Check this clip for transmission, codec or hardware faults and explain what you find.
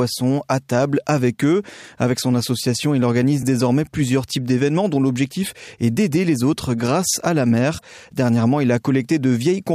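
There's one fault in this speech clip, and it's brief. Right after "autres grâce à la", from about 7.77 to 7.82 s, the audio skips forward. That's most likely a broken MP3 bit reservoir. Frames had dropped out, so the next frame reached back for borrowed data and decoded bytes from the wrong frame instead. The damaged stretch spans under two frames of roughly 26 ms each, heard as a quick jump.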